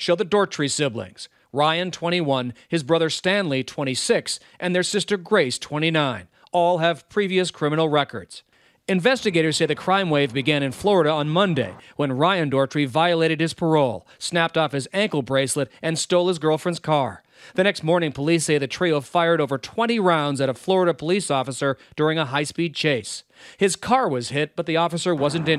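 No technical faults occur at any point in the clip, so there is nothing to describe in time order.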